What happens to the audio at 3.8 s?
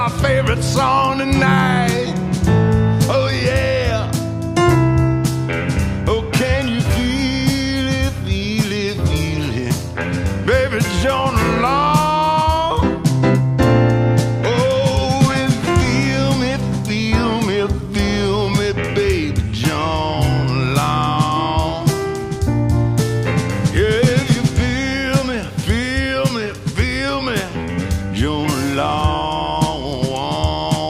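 Nothing goes wrong at 3.8 s; the audio plays through that moment intact.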